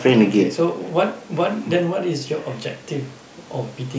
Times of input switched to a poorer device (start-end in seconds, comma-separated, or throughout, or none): none